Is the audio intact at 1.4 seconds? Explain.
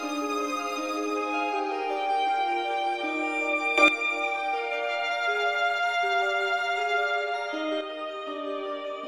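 Yes, the audio is intact at 1.4 seconds, with no dropout, click, distortion or other fault to be heard at that point.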